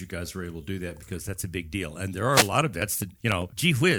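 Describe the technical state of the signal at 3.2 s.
At 3.2 s the speech is in the middle of a run of periodic USB or driver dropouts lasting from 2.62 s to 3.91 s. Every 0.1 s something stalls the audio path and a tiny slice of signal, roughly half a millisecond, is skipped, so the waveform jumps and leaves a tick. What sets it apart from random clicks or underrun gaps is the metronome-like spacing of about fifteen ticks, with no silence filling the missing slices.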